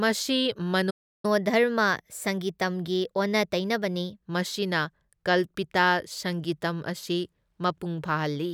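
A speech recording, with a playback stall from 0.9 to 1.25 s: the sound cuts out mid-flow for about 330 ms and then resumes exactly where it left off, with nothing missing. That continuity separates it from a dropout or edit, where material would vanish. The likely cause is the player running short of buffered data or having its output thread blocked until it recovered. Immediately afterward, from 1.25 to 4.25 s, comes catch-up at higher speed: the player works off its backlog by resampling at 1.1 times normal rate, so the speech runs quicker and sits about a semitone and a half higher. Because tempo and pitch rise together, this is resampling rather than time-stretching, which would alter tempo alone. Because the change lasts only three seconds after the gap and then returns cleanly to normal, it is a recovery phase rather than a steady speed error.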